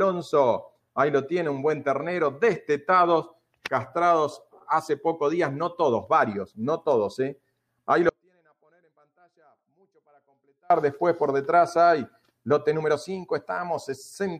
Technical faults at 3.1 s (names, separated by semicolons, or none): none